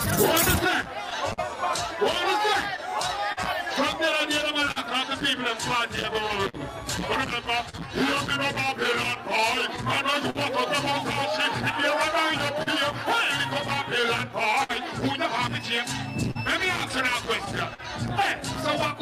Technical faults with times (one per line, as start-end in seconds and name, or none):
0.00-19.01 clock drift between sender and receiver
0.15-18.91 scattered short gaps